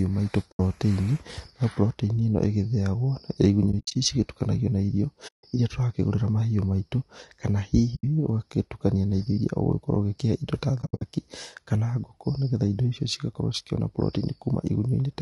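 Throughout the speech there is low-delay AAC compression damage, plainly audible: voices sound rough and grainy, with noise filling the gaps between harmonics and a thin, synthetic-sounding top band. The likely cause is AAC-ELD, the short-frame codec used in video calls, running at a low rate. The grain fits a bitrate near 32 kbps. On a spectrogram the harmonic stripes look smeared and speckled, and the upper band looks patchy and blocky.

AAC frame loss with muting occurs five times. The sound softly fades out and back in, leaving holes of 80 ms at 0.51 s and 160 ms at 5.27 s. Near 3.71 to 3.96 s the gaps are scattered over about 240 ms, the longest roughly 70 ms. There is an 80 ms hole at 7.95 s. From 10.81 to 11.02 s the losses are scattered over 200 ms, again with the longest run near 70 ms. These fit lost 20 ms frames whose spectrum the decoder zeroed. The waveform shows tapered dips to silence, and the spectrogram shows clean vertical blank bands.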